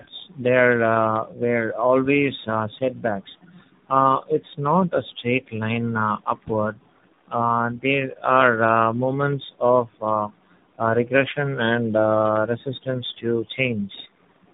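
Throughout, tandem speech coding: three speech codecs in a row each recoded the previous output, making it rough, muffled and warbly. A spectrogram shows nothing above 3.8 kHz.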